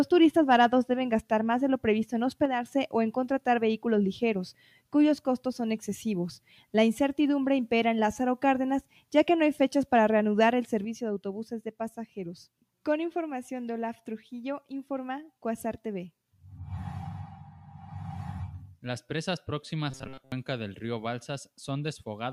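From 2.45 to 2.66 s the level falls abruptly by about 6 dB, which points to one channel dropping out. A noise suppressor dip would be gradual and would spare sudden sounds. At 4.53 to 4.93 s, 6.47 to 6.74 s and 8.82 to 9.04 s, the sound is cut by the noise suppressor. Steady and decaying parts sink by about 12, 9 and 11 dB, while sharp onsets pass, unlike a channel loss's uniform step. From 10.85 s to the end, the same sudden drop of about 6 dB returns and stays, again most likely one channel lost. At 19.91 to 20.32 s, a rigid metallic buzz at 133 Hz replaces most of the sound. This robotic sound from repeated short buffers fits a buffer of about 7.5 ms being looped, and unlike suppression it imposes a fixed pitch rather than a level dip.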